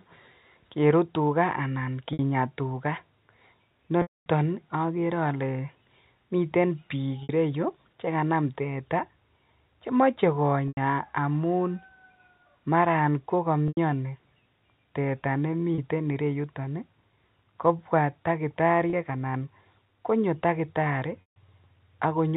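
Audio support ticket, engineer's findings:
Packet loss with pitch repetition. Brief buzzy held tone bridging gaps at 2.13 s (after "kerut tukaa anan", 60 ms), 4.02 s (240 ms, fades to silence, cross-fade back), 7.23 s (between "miten biik" and "ireyu chekanam teta", 60 ms), 10.68, 13.68 s (90 ms each), 15.75, 18.90 s (30 ms each), 21.21 s (after "konyo takitari", 150 ms). Network packet loss; concealment loops last pitch period, fades over about 50 ms. Gap lengths fit 30 ms packets. Narrowband G.711 path clean.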